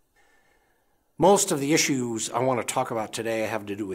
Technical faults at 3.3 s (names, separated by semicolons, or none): none